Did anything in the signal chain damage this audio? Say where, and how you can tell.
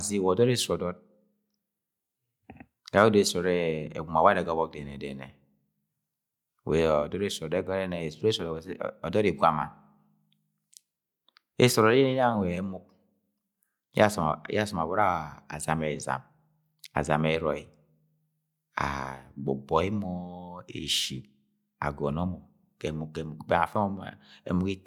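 No, nothing in the chain has left any audible mark on this speech recording, so there's no damaged stage to point to.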